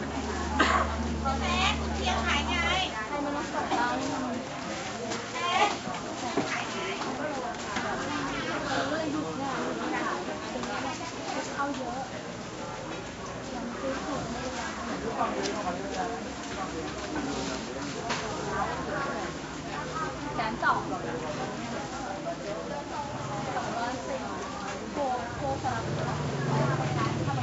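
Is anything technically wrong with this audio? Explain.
No, nothing's wrong here: the sound just carries the usual signs of a call, with the microphone processing trimming the deepest bass and the call codec capping the top end at around 8 kHz, which is normal for that kind of path.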